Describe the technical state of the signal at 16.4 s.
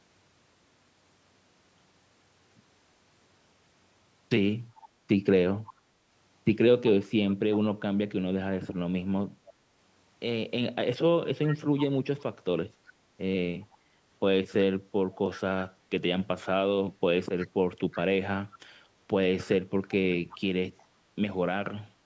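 At 16.4 s the speech is intact, with nothing wrong in the signal beyond the ordinary call microphone processing, which leaves no content above 8 kHz and trims the lowest bass as it normally does.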